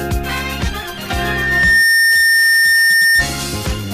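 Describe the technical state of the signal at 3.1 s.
At 3.1 s a steady, piercing whistle near 1.8 kHz sits well above the rest of the sound, roughly 10 dB louder. It is a loudspeaker feedback squeal that began at 1.10 s, swelled to full strength over about three quarters of a second, and stops at 3.28 s. The microphone is picking up its own loudspeaker, and around 1.8 kHz the loop gain tops unity, so that tone keeps feeding itself.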